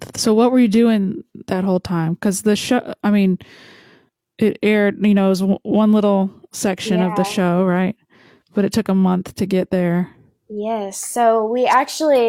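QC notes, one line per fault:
No fault found.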